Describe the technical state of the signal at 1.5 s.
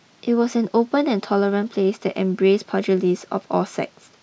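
At 1.5 s the speech signal is intact, with no audible technical fault at that point.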